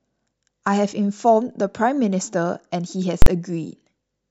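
At 3.22 s the speech is interrupted by invalid numbers at full scale, lasting about 43 ms until 3.26 s. A calculation in the processing chain produced infinite or invalid values, and these were forced to the maximum output level, so the waveform is pinned flat at one extreme value, far beyond the speech peaks, for the whole block. The length fits a 2048-sample processing block. Because the block is so short, the jumps into and out of full scale merge into one loud bang.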